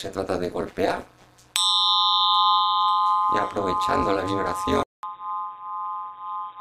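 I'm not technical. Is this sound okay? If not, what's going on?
No. Two problems can be heard.

Overlap-add ripple runs through the whole clip. The audio was chopped into short overlapping pieces and stitched back together unevenly, so the loudness pulses deeply about 200 times a second. That is fast enough to sound like a metallic buzz.

From 4.83 s to the end, the likely cause is an input switched to a poorer device. After a 0.2 s gap, the sound turns duller and narrower, gets a little quieter, and carries a new background noise, as if another microphone took over.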